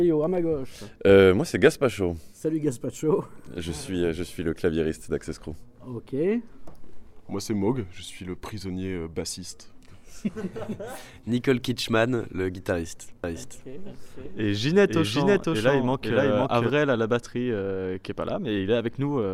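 From 13.24 s to 16.70 s the sound plays twice: a doubled audio track, with a full-band second copy trailing by about half a second at roughly equal level. It carries no decay or room colour and starts and stops abruptly, likely from a second, slower capture path being mixed in.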